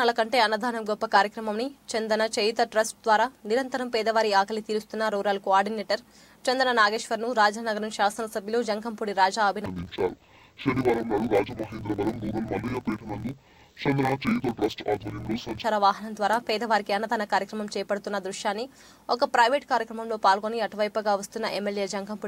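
From 9.66 to 15.66 s the audio drops an octave and takes on a dull, robotic buzz at 45.9 Hz, the mark of interleaved audio read as planar. Each 21.77 ms block is split into half-speed left and right halves. A spectrogram shows harmonics compressed downward with vertical striations every 21.8 ms, and the waveform shows matching seams.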